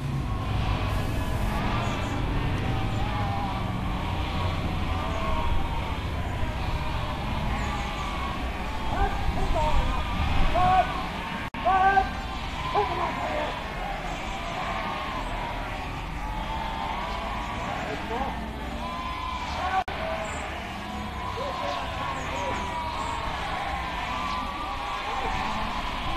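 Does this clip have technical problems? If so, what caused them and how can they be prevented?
Yes. From 0.90 to 1.58 s a distortion rides on the sound, likely a stuck bit, one converter data bit held fixed so about half the samples jump by a constant step. The waveform shows a flat offset band, and the spectrogram shows broadband hash. Checking converter wiring and running a bit-toggle test prevents it.

Two gaps at a join of encoded pieces cut the sound: one at 11.48 s lasting about 60 ms, one at 19.82 s lasting about 56 ms. Each encoder run's start delay and final-frame padding were left in. The waveform drops to a flat line, and the spectrogram shows a thin vertical blank strip. Encoding as one continuous pass, or trimming encoder delay and padding, prevents this.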